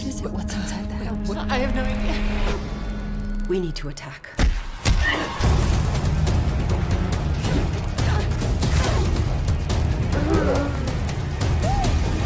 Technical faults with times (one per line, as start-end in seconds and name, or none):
0.00-12.25 resampler restarted on every block